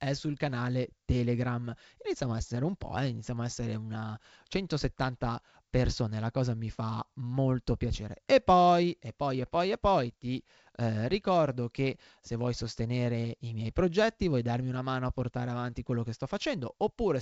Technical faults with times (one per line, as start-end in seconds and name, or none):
none